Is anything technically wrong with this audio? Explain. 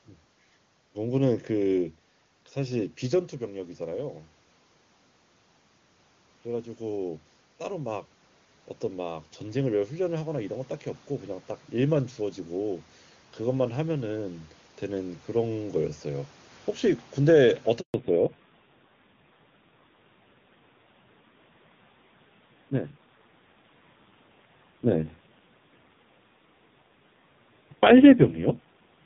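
Yes, there are three kinds of fault.

Automatic gain rising, from 6.46 to 10.57 s and again from 12.18 to 16.36 s: the gain control judged the input too quiet, after it dropped by about 9 dB in the first stretch, and raised its gain by about 4 dB each time. Voice and room noise swell together gradually over roughly four seconds.

Handover gap, from 17.8 to 17.94 s: the call was passed from one network to another, and no speech frames arrived during the switch. The voice cuts away within a few tens of milliseconds, leaving 140 ms of silence, and whatever was said there is lost.

Fallback to narrowband, from 17.94 s to the end: after the handover, the call dropped from HD Voice to an older narrowband codec, and the roughness points to a low bitrate. Nothing above 4 kHz remains, so the voice sounds duller, boxier and rougher.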